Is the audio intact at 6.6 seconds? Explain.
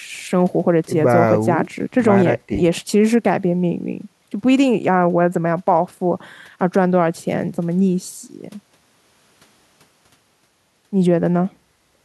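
Yes, the audio is intact at 6.6 seconds, with no fault audible at that moment.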